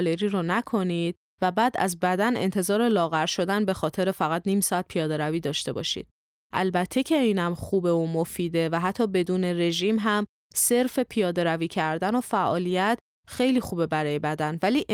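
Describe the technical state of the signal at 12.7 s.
At 12.69 s there is a lost packet rebuilt from error correction: one 20 ms stretch was played from a low-bitrate redundant copy carried in the following packet, so the speech continues without a gap but sounds briefly rougher and noisier.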